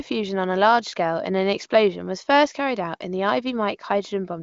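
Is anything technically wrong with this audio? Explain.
No, nothing technically wrong.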